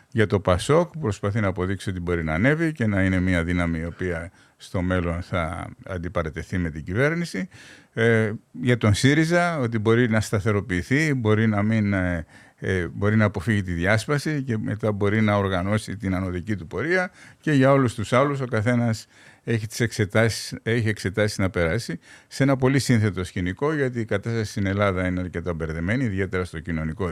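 No technical faults can be heard anywhere in this recording.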